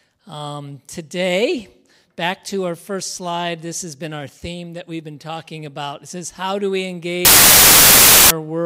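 At 7.25 s the audio collapses into loud, harsh broadband noise that lasts until 8.31 s, about 1.05 s. These are samples built from the wrong bytes: each value is assembled with its bytes misordered or shifted, so the rapidly fluctuating low-order bits land in the most significant position. A waveform shows a dense block of high-level noise, and a spectrogram shows energy smeared across the whole band.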